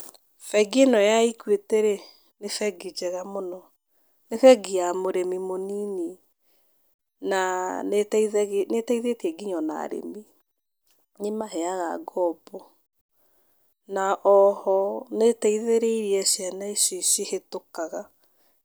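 At 11.41 s the speech drops abruptly by about 6 dB for roughly a tenth of a second, recovering at 11.52 s. The likely cause is one channel dropping out: with only one side feeding the mono sum, the shared signal halves and anything unique to the lost side vanishes. It sounds like a brief dip. The waveform shows a sharp-edged, step-down envelope, and the spectrogram a uniform dimming band across all frequencies.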